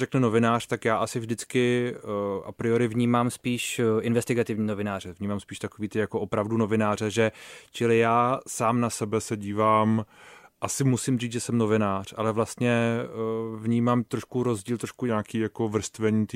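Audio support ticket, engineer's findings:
Speech abruptly faster and about a semitone sharp, 2.95–5.00 s (after "a priori", recovers at "vnímám spíš takový ty"): 6.4% speed-up, roughly 108 cents. Likely a drift correction step, where clock-matching resampler jumps rate to drain its buffer.

Likely the same drift correction step in reverse, 9.02–10.91 s (after "čili já sám na", back by "říct že jsem novinář") and 15.09 s to end (after "vnímám trošku rozdíl trošku"): 6.4% slower, about 115 cents flat, refilling the buffer.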